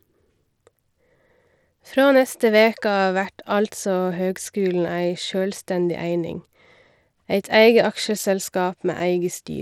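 Speech, with Bluetooth SBC compression damage audible throughout. The treble flickers and drops out, and a gritty noise rides on the voice. The cause is likely a starved SBC bit pool, and the damage fits a rate near 96 kbps.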